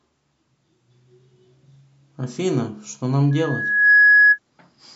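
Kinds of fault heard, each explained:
Loudspeaker feedback squeal: The microphone picks up its own loudspeaker. At one frequency the loop gain exceeds one. From 3.31 s a tone near 1.7 kHz swells for under a second. It peaks about 10 dB above the speech, then stops at 4.39 s.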